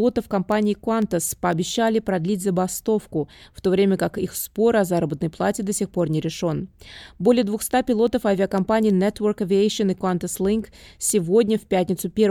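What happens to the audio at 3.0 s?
Word clock ticks run through 3.0 s, from 0.52 s to 12.1 s. The receiving device's clock drifts against the sender's by around 50 ppm, so about every half second one sample is dropped or repeated, leaving a sharp tick at that steady rate.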